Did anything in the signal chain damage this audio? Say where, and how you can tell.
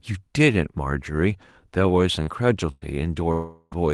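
Yes, the damage sits in the network stage of a call path, where packets went missing and the receiver covered for them. The Opus coding itself, band-limited at about 12 kHz, is not the problem.

At 2.23 to 2.30 s there is a short concealed packet loss. About 40 ms of audio never arrived in time, and the decoder bridged it by extending the preceding sound before blending back into real signal. It comes across as a brief smear or wobble rather than a hole. What separates it from a burst is its length: too short to fade audibly, though about 40 ms of material is skipped.

At 2.27 to 2.29 s, 2.82 to 2.84 s and 3.72 to 3.74 s, a lost packet was rebuilt from error correction. Each time, about 20 ms was played from the low-bitrate backup copy carried in the next packet. There is no gap and no extended tail. Instead, each of these moments sounds momentarily coarser and noisier than its surroundings. 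That roughness with unbroken continuity is what marks forward error correction rather than concealment.

From 2.71 to 2.85 s a burst of packet loss removed about 100 ms. The receiver filled it by holding the last sound and letting it sag in level. You hear a sustained buzz or hiss that fades instead of a clean cut, and the audio resumes slightly further on with material missing. That longer, decaying fill distinguishes it from the brief smear at 2.23 s.

From 3.32 to 3.74 s the audio is consistent with a long network dropout, likely a stall in delivery. About 400 ms was lost and replaced by a continued, fading tail that never quite reaches silence before real audio returns, with the intervening portion gone. Its duration, several tenths of a second, sets it apart from the 100 ms burst, and the rough patch at its end is the error-correction rebuild at 3.72 s.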